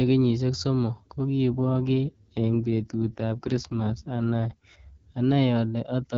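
At 1.52 s, just after "kenyishek somok", the AMR rate drop begins: the network instructs the AMR-WB codec to fall from 12.65 kbit/s to 6.6 kbit/s, shifting bits toward error protection on a weak link. Until 4.54 s the speech turns rough, raspy and synthetic, with no gap and no loss of bandwidth, then returns to the lightly coded 12.65 kbit/s wideband sound of the surrounding speech.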